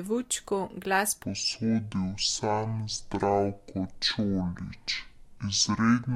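A speech recording with a section at the wrong speed from 1.23 s to the end. At that point playback drops abruptly to about 0.55 times the original rate, so the voice turns slow and deep, sitting roughly ten semitones lower, with speed and pitch shifting together. The likely cause is that this portion was played or edited against the wrong clock, stretching it to nearly twice its recorded duration.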